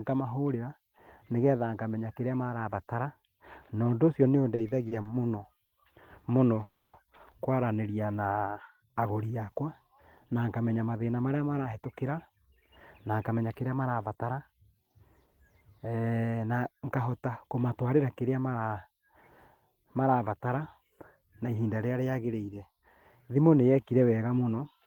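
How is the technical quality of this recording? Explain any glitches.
The quality isn't great. It's a speech recording with clear network-playback trouble: a stutter, a freeze, and two stretches where it rushes.

From 4.55 to 5.73 s there are repeated stalls (stutter). The playback buffer ran dry four times, so the receiver kept stretching the last bit of sound to cover each gap. Together the gaps come to 160 ms, the longest 60 ms, about 14% of that stretch. Nothing is lost, but the speech drags and hiccups.

At 6.63 to 6.95 s there's a call audio freeze. The sound hangs on itself as a continued tail for about 0.3 s, with no silence, then carries on from exactly where it stopped. It's likely that packets got held up in transit and the buffer emptied, so a gap was inserted while nothing went missing.

Then come two jitter buffer speed-ups, from 11.6 to 14.64 s at 109% speed and from 16.76 to 17.29 s at 107%. 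The buffer was holding more audio than it wanted, so the receiver trimmed tiny pitch-period slices over and over to catch up. That's roughly 0.3 s cut in the first stretch and only a few hundredths in the second. The pitch stays put, but the talking sounds hurried.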